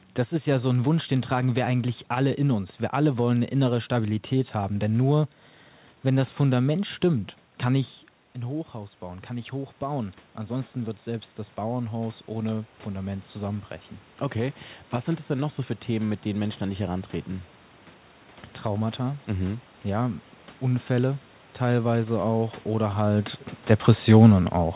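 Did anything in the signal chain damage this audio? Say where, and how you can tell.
Yes, at the call-processing stage: automatic gain rising from 8.35 to 17.57 s. After the talker moves back from the microphone around 7.5 s and the input drops by about 10 dB, the gain control slowly climbs by about 9 dB, restoring most but not all of the level. What separates this from a talker leaning in again is that the room noise swells right along with the voice. A closer talker would lift the voice alone. The G.711 A-law path's cutoff at 4 kHz stays steady throughout.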